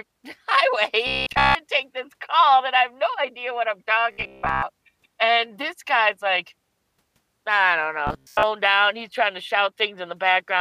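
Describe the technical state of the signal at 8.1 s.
At 8.1 s there is robotic sound from repeated short buffers, from 8.07 to 8.43 s, between "I don't" and "out he's tryna". The speech becomes a rigid metallic buzz near 67 Hz. That fits a 15 ms slice likely being replayed while fresh audio is skipped.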